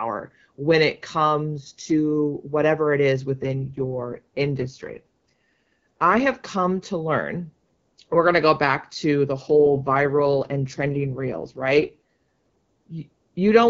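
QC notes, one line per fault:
3.42–6.21 s and 9.45–11.94 s, AMR rate drop: After "to whatever it is" and again after "go back to the", the speech turns rough, buzzy and synthetic, clearing by "have come to learn" the first time. The bandwidth holds and nothing drops out. The texture matches a wideband AMR stream falling from 12.65 to 6.6 kbit/s, trading detail for error protection on a weak link. Outside these spans the wideband codec leaves only light coding damage.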